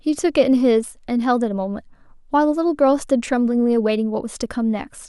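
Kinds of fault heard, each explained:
No faults turn up anywhere in this one, so there's nothing here to pick apart.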